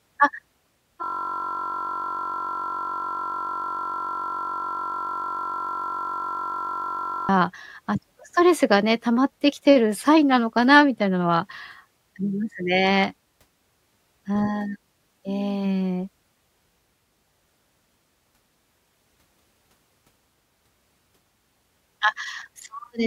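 A system hang loop runs from 1.04 to 7.29 s in this speech recording. The audio driver stalled while the hardware kept replaying one 21.33 ms slice, which fits a 1024-sample buffer, producing a steady buzz at about 46.9 Hz.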